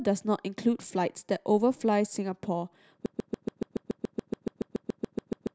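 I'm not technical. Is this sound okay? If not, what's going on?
No. From 3.06 s to the end, a broken-record loop repeats one 0.14-second snippet 18 times, likely a stalled player. Unlike an echo, nothing new plays underneath.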